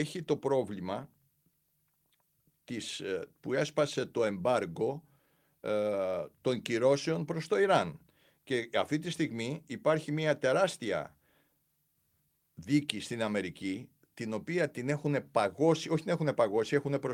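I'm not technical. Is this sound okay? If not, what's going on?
Yes, nothing technically wrong can be heard in this recording; the signal holds steady all the way, with nothing that needs fixing.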